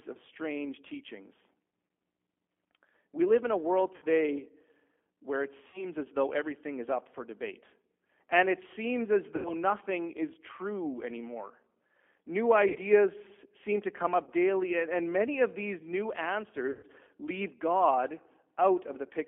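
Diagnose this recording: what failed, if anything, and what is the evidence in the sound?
Codec stage: the whole 19-second speech recording carries G.729 codec damage, plainly audible as a rough, synthetic timbre confined to roughly 300 Hz to 3.4 kHz, which fits 8 kbit/s G.729A. Its four-pulse excitation model causes that buzzy graininess, which simple telephone band-limiting would not add.

Network stage: VoIP packet loss concealed by the speech codec occurs at 3.96 s after "live in a world", 5.68 s after "where it", 9.36 s, 12.69 s, 14.24 s after "seem to come", and 16.71 s. Each loss lasts 30 to 120 ms. Instead of silent dropouts, the decoder stretches its last pitch and filter into a fading buzzy tone or coloured noise, and the speech stays weakened briefly afterwards.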